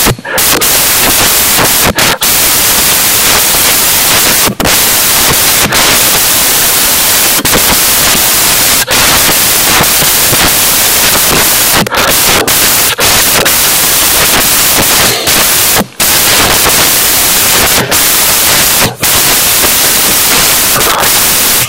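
From start to finish, samples built from the wrong bytes turn the fast-changing low bits into the loudest part of each value, producing loud, harsh broadband noise throughout.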